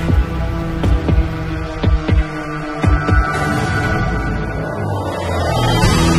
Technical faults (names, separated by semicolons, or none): adaptive stream at a lower bitrate